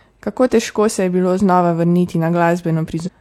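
Right near the end, from about 3.02 to 3.09 s, there's a short burst of damaged data in the compressed stream. Some bytes got mangled, so the decoder misreads those frames, loses sync and hunts for the next header. You hear it as a quick glitch lasting about 70 ms.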